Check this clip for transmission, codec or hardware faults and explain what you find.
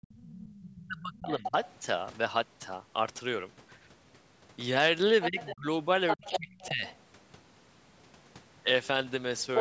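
The speech shows two linked faults from a call's echo handling. Both are likely caused by an echo canceller struggling while both sides talked at once.

Speech suppressed in double talk occurs from 0.0 to 1.52 s, again from 5.27 to 5.66 s, and from 6.16 to 6.85 s. The talker's level dips sharply in these spans. The deepest drop is roughly 35 dB in the opening stretch. The later drops are about 20 and 25 dB. The canceller could not tell the near talker from the loudspeaker echo. So it turned everything down.

The other side's voice leaking through is heard from 1.29 to 1.71 s, 5.21 to 5.56 s, 6.08 to 6.98 s, and at 9.55 s to the end. A second voice sits under the talker. It is about 10 dB below the speech at first, then about 5 dB below. In the final moment it is about 5 dB above. The canceller left part of the loudspeaker signal in the microphone feed. The leaks overlap the dips. The call microphone processing limits the sound to nothing above 8 kHz.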